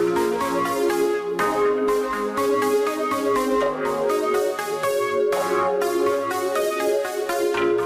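The clip's sound carries periodic clock jitter from start to finish. Interference is wobbling the converter's sampling clock at a steady rate of around 1 kHz. Each component of the sound picks up sidebands on both sides, spaced about 1 kHz away. Higher-frequency content is hit hardest, since the timing error matters more there. The result is a rough, metallic edge that sits on the sound and follows it.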